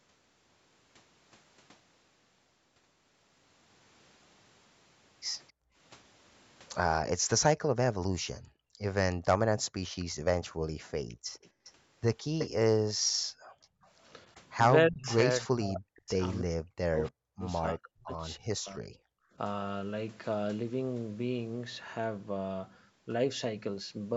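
At 5.48 to 5.52 s the far end's echo canceller likely failed to remove all of the loudspeaker sound its microphone picked up, and that leftover was sent back as an echo leak. It is a brief, very faint repeat of the speech, trailing about 268 ms behind.

From 5.52 to 8.81 s the same canceller turns the microphone down hard while its loudspeaker plays, so the background is gated by the echo canceller. The room sound drops by up to about 40 dB in short dips totalling well under a second, then comes back each time the canceller releases.

At 8.21 to 8.25 s both sides talk at once, and the canceller, likely unable to tell its own talker from the loudspeaker echo, pulls the talker down too. This speech suppressed in double talk is a deep, momentary bite out of the voice.

From 9.99 to 15.12 s a much stronger echo leak, likely from the same incomplete cancellation, returns a copy of the speech about 315 ms late and not far below the original, heard as a doubled voice.

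Between 10.51 and 13.86 s the background is gated again, dropping by up to about 40 dB for roughly a second and a half in total.

From 14.34 to 19.17 s double talk again likely makes the canceller suppress the talker. The voice dips deeply or cuts out in pieces, about three seconds in all.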